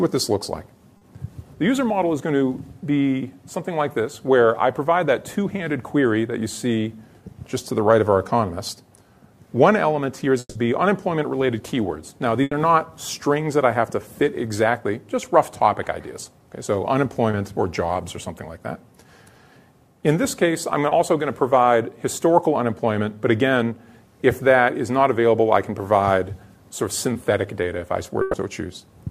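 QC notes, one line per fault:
0.97–1.03 s, 17.31–17.35 s, 20.89–20.93 s, 27.13–27.17 s: short concealed packet loss. Quick smears or wobbles where the receiver patched gaps of 20–40 ms by carrying on the previous sound.
10.39–10.57 s: long network dropout. About 160 ms of audio is replaced by a fading continuation, then roughly 30 ms of silence before the sound picks up further along. The likely cause is audio failing to arrive for that stretch.
12.43–12.53 s, 28.21–28.35 s: burst of packet loss. Gaps of about 80 ms and 120 ms are filled by a held buzz or hiss that dies away, and the sound resumes past the missing section.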